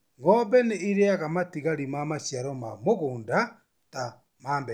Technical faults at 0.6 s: none

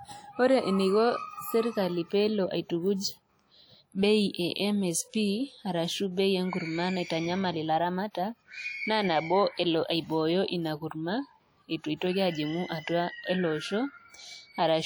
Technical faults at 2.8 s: WMA compression

